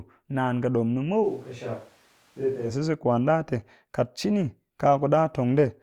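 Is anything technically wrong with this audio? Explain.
Yes. From 1.25 to 2.69 s the speech turns abruptly roomy and hollow, thinner in the bass, about 5 dB quieter and with more audible background noise, likely a switch to a distant microphone. The hard cuts in and out, with bass, level and room noise changing together, distinguish it from added reverb or a plain gain drop.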